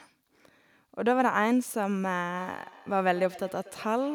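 From 2.36 s to the end at 4.15 s, feedback echo between two devices appears. A second device replays this speech, and the original microphone picks it up again. Each word comes back roughly a fifth of a second later, thinner and ringing, at most about 21 dB below the speech.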